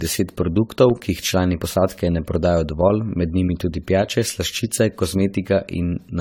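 Throughout, generation loss makes the speech sound swirly, hollow and smeared, with blurred consonant attacks. It likely comes from about ten passes through AAC-LC at 64 kbit/s. A spectrogram shows patchy spectral holes and nothing above 19.5 kHz.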